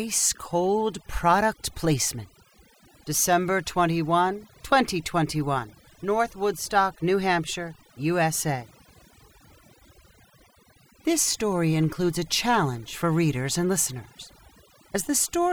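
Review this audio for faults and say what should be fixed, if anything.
Overdone noise removal runs through the whole speech recording. The reduction is set so aggressively that frequency bands sitting close to the estimated noise floor are pulled almost to silence, and the quieter parts of the voice are cut along with them. Between phrases the background drops to near silence scattered with twinkling specks. To prevent it, apply gentler reduction, or reduce noise at the source, and check the result on speech as well as on pauses.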